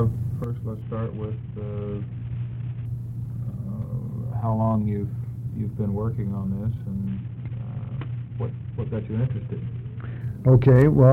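One channel drops out at 0.44 s: the level falls abruptly by about 6 dB and stays down to the end, with no change in tone. The likely cause is one side of an identical stereo pair going silent, halving the mono sum.

A Bluetooth SBC bit pool drop runs from 0.82 to 2.85 s and again from 7.07 to 10.21 s. Each time, the treble dulls and a gritty noise rises until the rate recovers. This fits the bit pool falling from 28 to 5, about 54 kbps, on a congested link, leaving the top sub-bands starved and the rest coarsely quantised.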